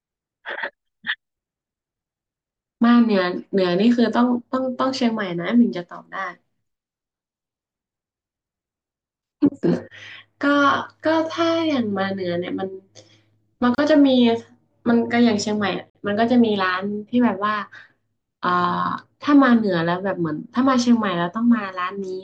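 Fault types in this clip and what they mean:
Gap at a join of encoded pieces: separately encoded segments joined untrimmed leave short silences, about 31 ms at 13.75 s and 50 ms at 15.90 s, in the speech.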